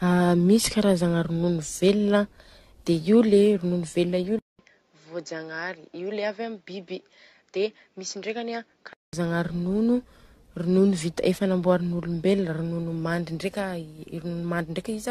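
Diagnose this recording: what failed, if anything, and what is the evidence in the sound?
The whole recording, a speech clip, shows codec-stage damage. Nothing is present above 14 kHz, and the sound is swirly, smeared and hollow, with consonant attacks blurred beyond what one encode at this bandwidth would produce. That points to generation loss, likely from re-encoding several times through an AAC chain at around 64 kbit/s. Each pass quantises on a shifted frame grid, so artefacts stack. A single low-bitrate encode would be band-limited without this cumulative hollowness.

From 4.39 s to 9.13 s the capture stage changes: the input switched to a poorer device. A silence of about 200 ms marks the switch, and afterwards nothing is present above 7.6 kHz. The level drops by about 5 dB, and a faint new noise floor appears, roughly 50 dB below the speech. The likely cause is a change of microphone or headset profile. 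A codec bandwidth drop would not bring the gap, the level step or the different noise, and the fuller band returning at 9.13 s confirms a device change.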